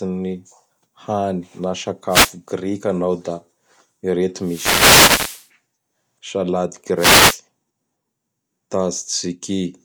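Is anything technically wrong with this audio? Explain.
Yes. Wireless microphone noise hits occur at 2.08–2.33 s, 4.40–5.48 s and 6.96–7.38 s: the analogue FM radio link fades as reflections cancel, so receiver noise rises into swishes or bursts of static over the speech.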